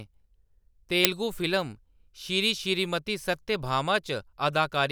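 A speech clip with an uninitialised buffer at 1.05 s: a burst of about 1.45 ms, consistent with a 64-sample block, where leftover memory was played as audio. It is a loud crack rather than a silent dropout or a single-sample click.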